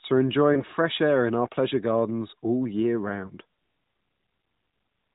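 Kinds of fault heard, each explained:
Lost AMR speech frames: twice, near 0.54 s and 3.28 s, one 20 ms frame failed its check and the decoder repeated the last pitch and vocal tract settings at reduced gain, a brief dip; the waveform sags briefly, the spectrogram shows a smeared patch below 4 kHz.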